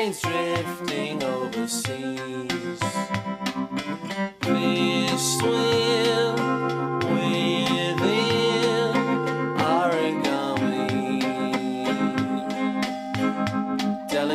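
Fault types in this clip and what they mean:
No fault types are present in this clip, so there is nothing to explain.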